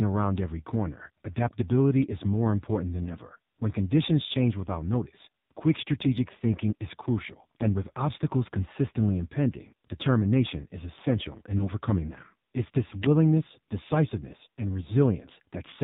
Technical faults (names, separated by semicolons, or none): AMR narrowband mobile codec; lost AMR speech frames